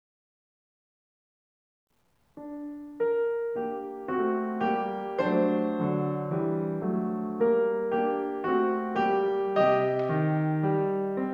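A music clip with grainy, signal-following distortion throughout, quiet passages turning gritty at roughly 50 dB below the music: low bit depth without dither, likely truncation to 10 bits.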